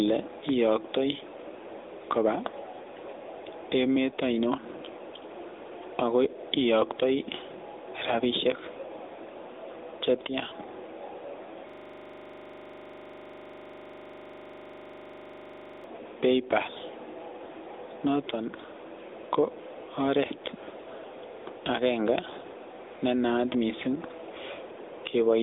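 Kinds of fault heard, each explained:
gain pumping: The level keeps breathing, with a gain swing of roughly 10 dB. That's most likely a gain setting pushed far too high for the mic, with a fast limiter or compressor clamping down on every peak. Loud and quiet parts end up squeezed close together, so the whole thing sounds flattened and a bit seasick.
AMR narrowband mobile codec: This has the classic old-phone sound. The speech sits in a line band from about 300 Hz to 3.7 kHz and there's nothing at all above 3.8 kHz, so it's thin and muffled. The damage is plainly audible, with that buzzy, synthetic edge you get when a vocal-tract model rebuilds the voice from a handful of pulses per frame. The amount of artefact fits a mid-range rate of around 10.2 kbps.
system hang loop: From 11.70 to 15.84 s the audio freezes into one 40 ms sliver repeated over and over, about 25 times a second, giving a harsh rattling buzz-stutter for roughly four seconds. 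That's what you hear when the system or driver hangs while the sound hardware keeps cycling the same ring buffer. The short loop length fits a buffer of roughly 40 ms being played again and again until things recover.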